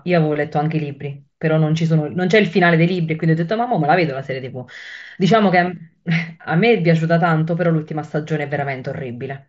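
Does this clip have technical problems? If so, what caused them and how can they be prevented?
Yes. At about 5.01 s there is one instance of concealed Bluetooth headset packet loss, a gap of 7.5 ms, which fits a single lost packet between headset and phone on the mSBC link. The receiver filled it by repeating the best-matching stretch of the preceding waveform, so it passes as a faint flicker rather than a click or a dropout to silence. Unlike a longer run, it never builds into a held buzzy tone. Keeping the phone close to the headset, clear of body shielding and 2.4 GHz interference, prevents it.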